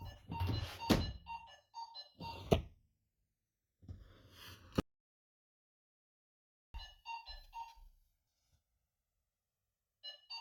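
Throughout, the two channels are drifting apart: they were captured on separate clocks disagreeing by around 200 parts per million, so the inter-channel delay creeps up to roughly a millisecond and a half by the end, and in mono the comb notches slide slowly, giving a slow flanging sweep.

At 2.53 to 2.58 s, compressed frames were skipped: a few 20 ms frames, together about 70 ms of audio, never reached the output, either missing or rejected by the decoder as damaged. The sound jumps forward at the join.

From 4.80 to 6.74 s there is an audio dropout to silence, likely a lost input such as a disconnected device, failed link or accidental mute while writing continued. About 1.94 s is replaced by silence with no room tone, cutting off abruptly and resuming mid-flow.

At 8.27 s frames are skipped again, with about 70 ms of the sound lost in the same way and the same jump at the join.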